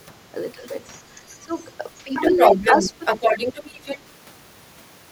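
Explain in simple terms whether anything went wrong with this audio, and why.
A couple of echo-canceller problems show up here. First, speech suppressed in double talk: the voice dips or briefly drops out at 0.54–0.65 s, 1.4–1.57 s, 2.04–2.12 s, 2.31–2.63 s and 2.82–3.0 s. The 1.4 s dip is the deepest, and the 2.31 s one is only slight. Likely cause: both ends talked at once, and the canceller couldn't separate them, so it turned everything down.

Second, the other side's voice leaking through: a faint scrap at 1.29–1.36 s, then a long stretch from 2.14 to 3.99 s where it's about as loud as the main talker. It's coming from the loudspeaker, which the canceller likely failed to scrub out of the microphone.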